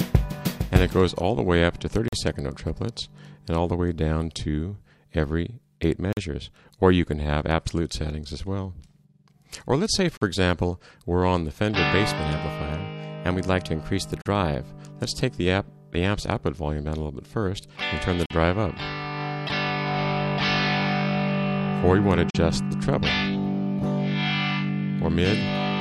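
Gap between chunks at 2.08 s, 6.13 s and 10.17 s: the audio arrives in 4-second chunks with about 44 ms of silence left at each join, so the sound is cut by short, hard-edged holes that recur steadily, with no sound lost.

Drift correction step from 12.18 s to 14.61 s: speed rises about 5.4% and pitch about 90 cents, nearly a semitone, then snaps back. This is likely a clock-matching resampler changing playback rate in one jump to rebalance its buffer.

The same 44 ms chunk gaps continue at 14.22 s, 18.26 s and 22.30 s, keeping the regular four-second rhythm of clean dropouts.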